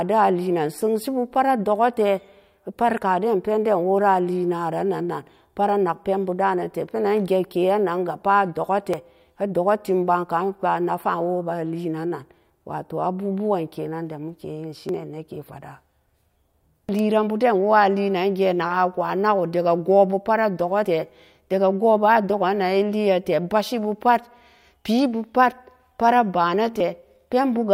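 Short skips break into the speech at 2.98, 8.94, 14.89, 20.85 (just before "tee daga goh") and 26.80 s, each a clipped jump where something like 40 ms vanishes and the two sides butt together without any pause. Their steady spacing, roughly every 6 seconds, points to audio missing between chunks: the recorder likely drops a sliver each time it closes one 6-second block and opens the next.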